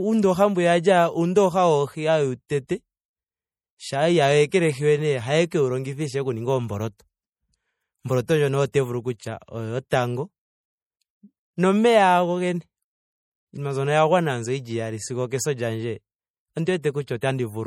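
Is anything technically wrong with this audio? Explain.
Yes. Throughout this speech clip there is audible MP3 compression damage, likely from low-bitrate encoding around 48 kbps. Content above 17.1 kHz is cut off, and weak frequency components drop in and out, giving a watery, swirly texture.

Pre-echo occurs at 2.67–2.69 s, 4.50–4.52 s, 6.99 s, 8.72–8.74 s, 16.82–16.84 s and 17.21 s, each lasting 10 to 22 ms. Quantisation noise is spread across the transform block, so a short hiss precedes each sharp attack and softens it.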